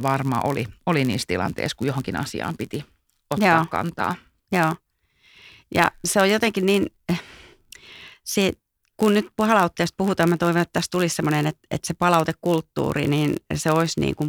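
Throughout the speech, a block size mismatch (padded) is audible. One stage delivers blocks slightly shorter than the next stage reads, and the shortfall is filled with zeros. These tiny silent gaps recur at 91.5 Hz, producing a steady buzz under the speech. Playback runs at 0.996 of normal speed, with pitch essentially unchanged. A waveform shows brief flat dropouts at regular intervals, and a spectrogram shows evenly spaced harmonic lines at multiples of 91.5 Hz across the band.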